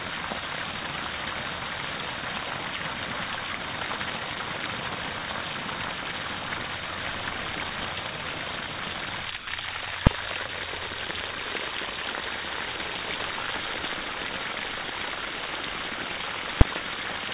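At 9.38 s the sound cuts out for 90 ms and is replaced by a short stretch of steady, featureless noise, returning at 9.47 s. This is likely sound dropped by the voice detector: the sending side judged the audio to be background, stopped transmitting, and the receiver filled the 90 ms gap with comfort noise until the detector triggered again. Like the rest of the clip, the inserted noise stops at 4 kHz, which fits a narrowband G.711 call path.

At 10.07 s a single sharp bang cuts through the audio, and a second one follows at 16.61 s. Both are invalid numbers at full scale. A calculation produced infinite or invalid values, and these were forced to the maximum positive or negative level for one processing block. The first block lasts about 2.7 ms, which fits a 128-sample block, and the second about 5.3 ms, which fits 256 samples. Each block is too short to hear as separate start and end pops, so each lands as one loud click.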